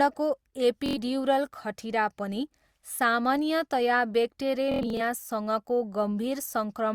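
A brief buzzing, machine-gun stutter breaks into the speech from 0.86 to 0.98 s, and a longer, broken-up stretch of the same rattle returns from 4.72 to 5.01 s. Both are Bluetooth stutter: packets failed to arrive in time, so the receiver kept replaying its last short slice until fresh data came. The first gap swallows about 93 ms, which fits roughly four lost packets. The second scatters about 163 ms of loss across 279 ms, its longest run again 93 ms, before the speech resumes as though it had kept playing.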